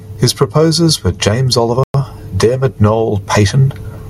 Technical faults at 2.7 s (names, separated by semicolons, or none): gain pumping